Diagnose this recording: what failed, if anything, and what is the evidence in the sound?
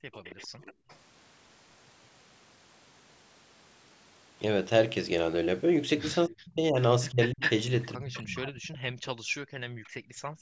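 Call processing, echo canceller: background gated by the echo canceller. From 0.00 to 0.88 s the room sound dips, down by about 27 dB at worst, for roughly 300 ms in total. At 9.78 to 10.38 s it drops by about 40 dB for roughly half a second. The suppressor is clamping the microphone while far-end audio plays.

Call processing, echo canceller: echo leak. A faint delayed copy sits 279 ms behind the speech from 0.12 to 0.96 s, about 25 dB down. From 7.22 to 8.50 s a much stronger copy trails by 397 ms at only about 5 dB below the speech. A trace of it returns around 9.84 s at about 30 dB down. The likely cause is residual loudspeaker pickup that the canceller failed to subtract.

Call processing, echo canceller: speech suppressed in double talk. Between 6.27 and 10.16 s the talker's level is cut in pieces by as much as 40 dB, for about two seconds in total, overlapping the strong echo. This is likely the canceller misreading simultaneous talk as echo and attenuating both.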